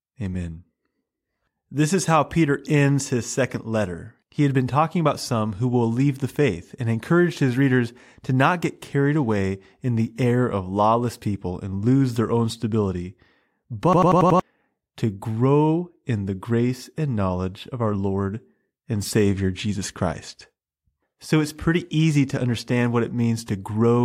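Speech, with a system hang loop from 13.93 to 14.40 s. One slice of sound about 93 ms long repeats exactly, about five times, at 10.8 repeats per second. At that length it gives a machine-gun stutter rather than a steady buzz. That loop length fits a 4096-sample buffer. The system froze while the audio hardware kept replaying its ring buffer. About half a second of new audio never arrived and is missing.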